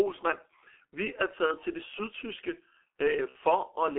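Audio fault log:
throughout, G.723.1 codec: heavy coding damage leaves muffled, hoarse speech confined to 300 Hz to 3.4 kHz, with blurred consonants, consistent with 6.3 kbit/s G.723.1's slowly updated voice model.
1.46–1.54 s and 3.29–3.36 s, VoIP packet loss concealed by the speech codec: about 30 ms, then 60 ms, of missing audio is extrapolated from the previous pitch and filter, giving a fading buzzy or noisy smear that stays weak briefly afterwards.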